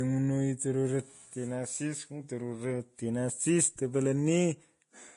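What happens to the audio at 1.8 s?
At 1.8 s the speech carries Vorbis compression, present throughout the clip. Treble is cut off above 10.6 kHz. Fine high detail becomes grainy hiss, and attacks blur. This likely comes from heavy lossy coding, fitting a low bitrate near 30 kbps.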